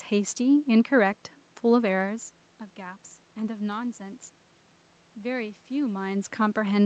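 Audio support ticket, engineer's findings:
Nothing stood out on listening; the faint room noise sits about 52 dB below the speech, and the level shifts near 2 s and 6 s sound like the talker moving relative to the microphone.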